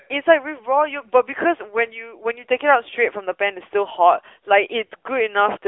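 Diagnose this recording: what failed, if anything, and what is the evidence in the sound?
AMR narrowband mobile codec, present throughout: the speech is confined to roughly 300 Hz to 3.5 kHz and has a plainly audible buzzy, synthetic edge. This points to the AMR-NB codec at a mid-rate mode of around 10 kbps, which models the vocal tract from sparse pulses in each 20 ms frame.

Lost AMR speech frames, 4.86 to 4.92 s: the speech briefly smears and dips in level for about 40 ms, which fits two consecutive 20 ms frames lost on the network. The decoder concealed the gap by repeating its last good pitch and vocal-tract settings at falling gain.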